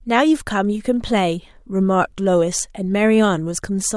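Nothing is technically wrong with this speech recording, so there are no times or causes to give.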